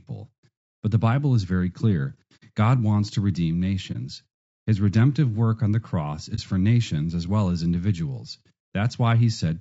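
All the way through, the speech sounds rough and grainy, with a hiss filling the gaps between harmonics and a thin, synthetic top end. That's likely low-delay AAC compression, AAC-ELD at a rate around 32 kbps, where the low bitrate can't code the harmonics cleanly.

Then there's AAC frame loss with muting at 2.36–2.43 s, 3.92–3.96 s and 6.35–6.39 s. The decoder zeroed the lost frames, so you get a soft-edged hole and brief dips: the first is about 60 ms, fitting two frames, and the others about 30 ms each.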